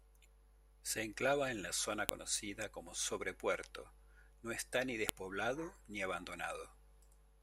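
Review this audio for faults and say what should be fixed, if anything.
File header played as audio at 2.09 s and 5.09 s, 3 s apart: leftover WAV header bytes at each piece boundary play as samples, giving sharp clicks that show as thin vertical broadband lines on a spectrogram and short spikes in the waveform. Strip each piece's header before joining or streaming.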